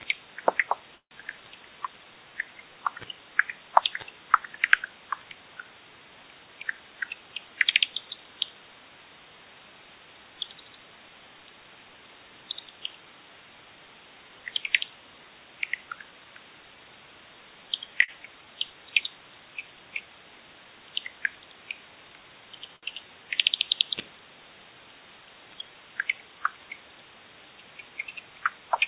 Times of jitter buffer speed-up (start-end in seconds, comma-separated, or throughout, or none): 6.44-7.82